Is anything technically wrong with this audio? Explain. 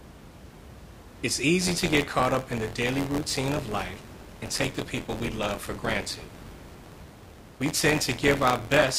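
Yes. Buffer tearing runs from 1.60 s to the end. Writer and reader have slipped, splicing in older audio each cycle. This causes a robotic 86.1 Hz buzz, which fits a 512-sample buffer.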